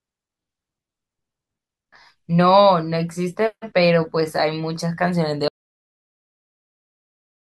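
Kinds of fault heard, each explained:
Cut-off end: at 5.48 s the speech halts mid-sound into digital silence with no decay, because the final buffers were never written out.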